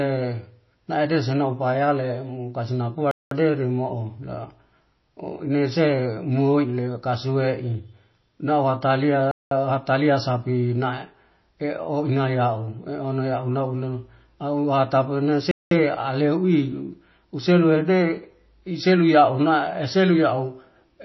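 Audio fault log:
throughout: MP3 compression, likely at a low bitrate near 24 kbps. Nothing is heard above 5.8 kHz, and plainly audible watery swirl, smeared attacks and chirpy s sounds come from the encoder dropping treble and switching weak frequency lines on and off between frames.
3.11–3.31 s, 9.31–9.51 s, 15.51–15.71 s: gap between chunks. Each is a 200 ms silence recurring with every 6 s of audio, where the chunks were joined with a hole between them. No speech is lost, but it stops and restarts abruptly at each join.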